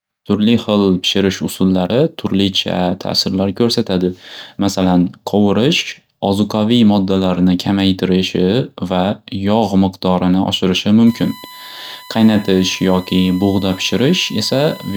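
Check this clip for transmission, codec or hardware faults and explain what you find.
One hardware fault is present: USB whine. It starts at 11.07 s, just after "miqdorini oshirishi", and runs to the end of the clip. A steady tone at 1 kHz sits under the speech, around 20 dB below it. Its pitch never moves. The USB bus draws current in 1 ms frames. That 1 kHz pulsing leaks into the audio path through shared power or ground. It is heard as a thin, constant whistle.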